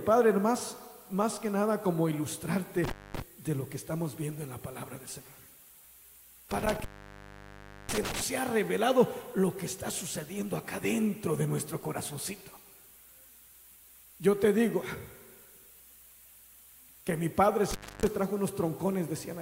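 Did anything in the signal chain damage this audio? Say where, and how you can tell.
Yes. Intermittent contact in the analogue wiring at 2.84–3.22 s, 6.51–8.22 s and 17.71–18.07 s. A loose plug or cable opens, cutting the sound for 0.23 s, 1.05 s and 0.28 s, with crackle as contact breaks and remakes and faint hiss between.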